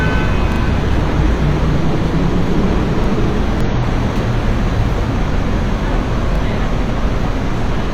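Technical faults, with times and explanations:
0.52–0.60 s, 3.04–3.08 s and 6.36–6.40 s: repeated buffer. A 40 ms piece of sound plays again, twice extra at 0.52 s and once at the other two points, because fresh audio arrived late. Each hard join gives a short stutter, and the 40 ms length fits a 40 ms output buffer.
3.61–3.66 s and 5.91–5.95 s: damaged data in a compressed stream. Corrupted bytes in the encoded stream cause the decoder to misread frames and lose sync until it finds the next valid frame header. Each event sounds as a brief chirp or blip lasting about 40 to 55 ms.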